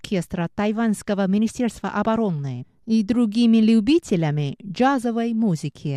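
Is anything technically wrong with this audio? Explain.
No, nothing technically wrong can be heard here.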